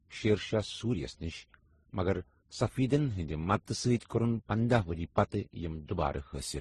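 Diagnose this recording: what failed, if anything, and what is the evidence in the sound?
The codec stage is where this went wrong, and it sounds like transcoding between lossy codecs. Across the whole speech clip there's nothing above 12 kHz, and the artefacts of the different codecs are heard together. That layering most likely comes from several passes through low-bitrate encoders ending in MP3, with each pass spending bits on the previous one's damage and adding its own. The lowest cut-off in the chain sticks.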